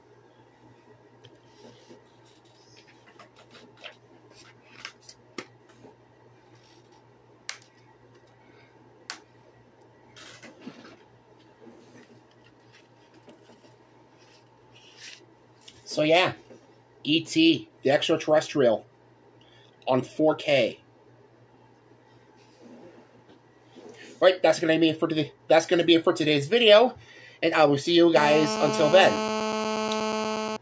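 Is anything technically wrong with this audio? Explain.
Yes. From 28.16 s to 30.57 s there is GSM phone buzz. A nearby 2G phone on a call sent radio bursts about 217 times a second, and the audio circuitry rectified them. The result is a steady, harsh, raspy 217 Hz buzz with many harmonics, only about 6 dB below the sound.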